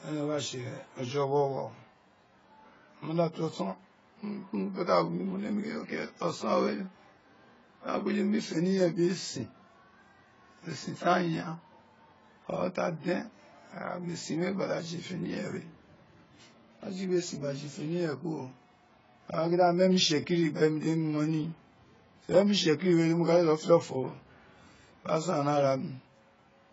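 AAC compression runs from start to finish, with heavy damage to the speech. Nothing survives above about 7.6 kHz, so the sibilants lose their top and the whole recording sounds dull and boxed-in. The likely cause is AAC-LC coding at a very low rate, one that fits roughly 16 kbps. With so few bits per frame, the encoder drops the upper spectrum and quantises what remains coarsely, which smears the consonants.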